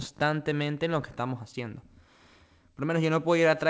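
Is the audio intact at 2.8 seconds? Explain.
Yes, the audio is intact at 2.8 seconds: the speech there comes through the call path's G.722 codec with nothing above 8 kHz and no fault at that moment.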